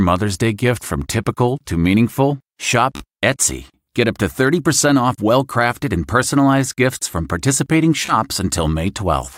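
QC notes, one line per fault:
2.96 to 3.04 s, Bluetooth stutter. Data arrived late or not at all, so the receiver replayed its last short slice. This is a brief buzz. Playback then resumes as if 42 ms had passed.
8.06 to 8.15 s, Bluetooth stutter. The same repeated slice gives a machine-gun effect. Then sound jumps ahead past a 28 ms gap.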